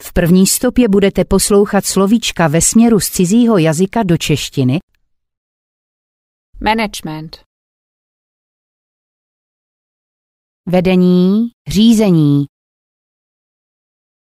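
No technical faults are audible.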